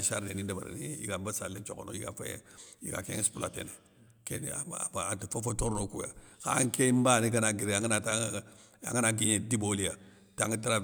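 Nothing stood out on listening to this speech recording.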